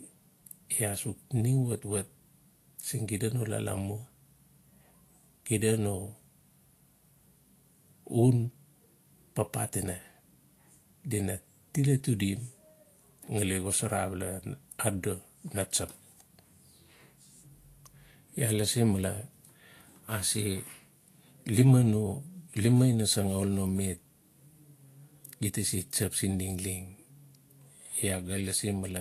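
Throughout the speech, the treble is hissy and grainy, with roughened tones and smeared consonant attacks. This points to Vorbis compression, likely at a low setting around 36 kbps, where coarsely quantised high-frequency detail is rebuilt as noise carrying similar energy.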